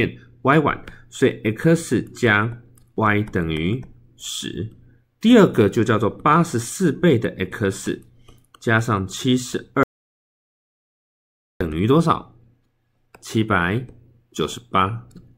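At 9.83 s the sound just stops dead and stays gone until 11.61 s, so you lose about 1.77 s. It's a classic audio dropout to silence: the gap is silent, with no room tone or hiss underneath. That points to the input being cut off, likely a dropped connection or a stray mute, while the recorder kept writing empty samples. Whatever happened in that stretch is simply missing.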